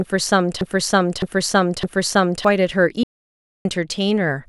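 A broken-record loop runs from the very start to 2.45 s. It is already under way when the clip begins: a stretch of speech about 0.61 s long plays again and again, back to back and identical each time, repeating three times. This likely comes from a player, encoder or stream that stalled and kept re-sending the last fragment in its buffer. Whatever speech belonged in those seconds never arrives.

An audio dropout to silence follows from 3.03 s to 3.65 s. The speech cuts off mid-flow and the next 0.62 s is silence, with no room tone or background at all, before the sound resumes just as abruptly. The likely cause is a momentary loss of the input signal, such as a disconnected device, a failed link or a stray mute, while the recording carried on writing silence. Anything spoken in that gap is lost.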